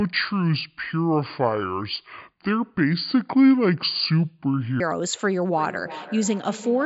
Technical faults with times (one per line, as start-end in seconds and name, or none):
0.00-4.80 section at the wrong speed
5.51-6.86 feedback echo between two devices